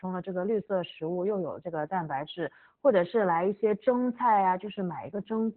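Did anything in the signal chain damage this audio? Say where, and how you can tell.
Yes, at the codec stage: Opus voice compression, heavy throughout. Nothing survives above 4.3 kHz, so the speech sounds muffled, hoarse and a bit robotic. That points to narrowband SILK at a very low bitrate, around 8 kbps, coding the excitation coarsely.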